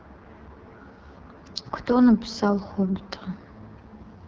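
AMR wideband (HD Voice) codec damage runs throughout the speech, heavy enough to point to the lowest 6.6 kbit/s mode. At that rate the pulse-driven vocal tract model is starved of bits, so the voice turns rough and raspy, with noise-filled highs above 6.4 kHz.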